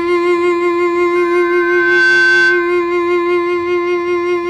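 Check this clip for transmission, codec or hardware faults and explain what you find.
Two faults are audible in this music clip, and they overlap near the end of the first.

From 1.15 to 2.91 s there is loudspeaker feedback squeal. A microphone is picking up the loudspeaker it feeds, and at 1.5 kHz the loop gain exceeds one, so that tone reinforces itself. It swells over roughly a second into a steady whistle around 5 dB above the music.

From 2.76 to 2.79 s, just before the squeal ends, there is a short stall from a late packet. The jitter buffer ran dry, so the receiver held the last sound for 17 ms until the packet arrived, then carried on with nothing lost. It is heard as a brief hang in the sound, and playback runs 17 ms later afterwards.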